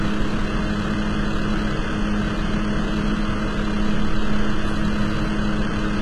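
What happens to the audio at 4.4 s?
A DECT cordless phone buzz runs under the sound at 4.4 s, as it does through the whole clip. Radio bursts every 10 ms are rectified by the audio circuit into a thin, steady 100 Hz buzz roughly 25 dB below the sound. A spectrogram shows evenly spaced horizontal lines at 100 Hz and its harmonics, and a zoomed waveform shows a small spike repeating every 10 ms.

The same moment carries heavy damage whose likely cause is HE-AAC compression, at a rate that fits around 16 kbps. The treble is rebuilt from copied lower bands, so bright detail sounds gritty and metallic, with harmonics that fail to line up. On a spectrogram, content stops sharply at 11.8 kHz, and the upper bands look like blocky, repeated patterns of the lower ones.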